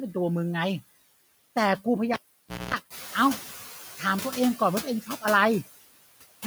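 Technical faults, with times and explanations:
Throughout: noise suppressor artifacts. Background noise is cut by about 16 dB, dipping between phrases and swelling under speech; a spectrogram shows a patchy, fluttering noise floor.
2.14–2.74 s: cable pulled and plugged in. A pop, about 0.56 s of near silence, a 0.23 s burst of 60 Hz buzz, then another pop; the waveform shows spikes around a flat gap, with horizontal hum lines on the spectrogram.
2.9–3.58 s: noise suppressor catching up. Room noise jumps about 13 dB near 3 s and passes through with only about 8 dB reduction until the estimate adapts over 0.68 s, so the spectrogram's noise floor brightens, then fades.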